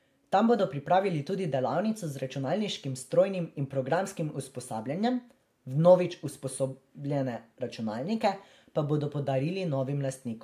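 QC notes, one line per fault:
No audible faults detected.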